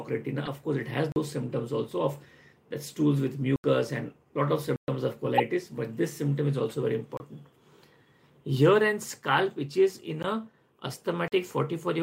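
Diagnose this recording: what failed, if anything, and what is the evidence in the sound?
The codec stage failed twice: damaged compressed frames reached the decoder and were played instead of being concealed. Misread gains and codes put energy at wrong frequencies for the length of each bad frame. At 0.45 to 0.49 s about two frames are hit, giving a short glitch. From 5.22 to 5.40 s a run of roughly seven frames produces a longer glitch.

The driver or buffer stage also failed. The output buffer was likely not refilled in time, so blocks of samples went out as zeros, making blocks of digital silence. The sound drops out and returns with no fade. Gaps occur at 1.12 s (40 ms), 3.56 s (80 ms), 4.76 s (120 ms), 7.17 s (27 ms), 10.23 s (13 ms) and 11.28 s (40 ms). The 40, 80 and 120 ms gaps are whole multiples of 40 ms, which points to complete buffer-sized chunks being missed.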